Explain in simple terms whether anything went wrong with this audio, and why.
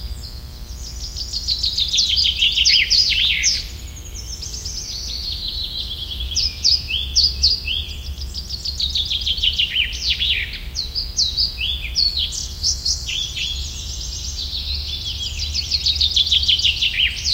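Mains buzz runs through the whole recording, from start to finish. Electrical interference from the 60 Hz power supply leaked into the audio path, adding a steady, raspy hum made of many high-pitched overtones that sits underneath the sounds.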